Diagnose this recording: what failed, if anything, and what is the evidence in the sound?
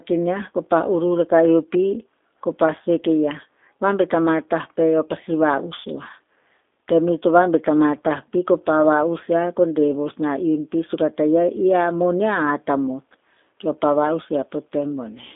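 G.729 codec damage runs throughout the speech, at the codec stage. Nothing survives above about 3.7 kHz, the line band sits near 250 Hz to 3.6 kHz, and the plainly rough, synthetic timbre fits an 8 kbit/s coder rebuilding the sound from filter, pitch and pulse parameters.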